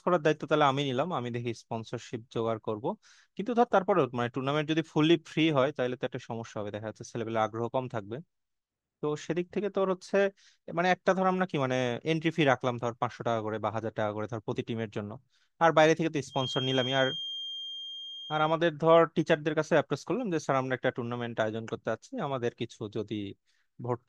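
From 16.27 to 18.60 s a steady 3.2 kHz feedback whistle sits well under the speech, likely a loop poised at feedback, never swelling into howl.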